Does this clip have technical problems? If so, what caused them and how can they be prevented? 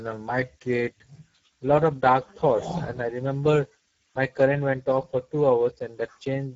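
Yes. Throughout, the speech carries plainly audible Speex codec damage. Starved CELP excitation makes it hoarse and noisy, and nothing remains above 7.7 kHz. This fits a bitrate near 10 kbps. A simple low-pass would sound dull but clean. To prevent it, encode at a higher Speex quality setting or use a modern codec such as Opus.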